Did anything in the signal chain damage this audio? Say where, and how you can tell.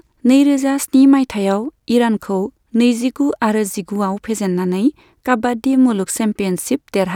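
Yes. Two isolated sharp clicks in the speech, at 3.30 s and 5.91 s, each a thin vertical line across the spectrum. These are likely dropped samples in the driver or buffer stage. A handful of samples go missing, so the waveform jumps abruptly.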